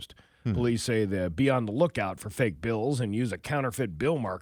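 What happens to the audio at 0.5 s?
Nothing goes wrong at 0.5 s; the speech carries on intact through that moment, with no dropout, click or distortion.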